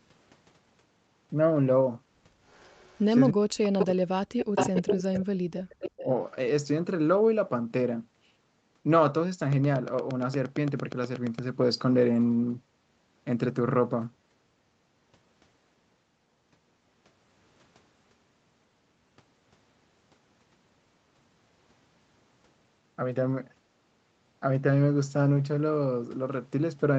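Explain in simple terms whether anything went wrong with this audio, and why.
A second copy of the voice, trailing about a third of a second behind, turns up at 2.47 to 3.06 s, 3.79 to 3.86 s, 4.55 to 4.95 s, 5.16 to 5.25 s and 5.87 to 6.05 s, sometimes quiet and sometimes as loud as the talker. This is an echo leak, likely from a loudspeaker on the far end whose echo canceller let some of the sound its microphone picked up slip back into the call.

From 3.32 to 4.06 s and again from 4.24 to 5.98 s, the talker's voice sinks sharply, almost vanishing at its worst. This is speech suppressed in double talk. Both sides were likely talking at once, and the echo canceller, unable to tell voice from echo, turned everything down.

Between 9.53 and 11.40 s there is a steady ticking, about fifteen similar clicks at a regular pace of roughly 8.6 per second, poking out above the speech. This train of clicks likely comes from interference from nearby equipment or a faulty connection or power supply injecting repeated pulses.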